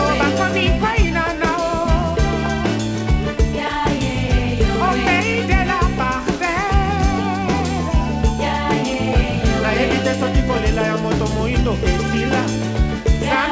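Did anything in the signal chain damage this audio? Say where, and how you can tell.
No, nothing in the chain damaged this audio. It went through a WebRTC call path, and the content stops at 8 kHz, which points to a wideband call codec such as G.722 doing its normal job.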